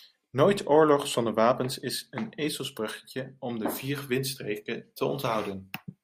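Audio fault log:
No fault in this speech clip.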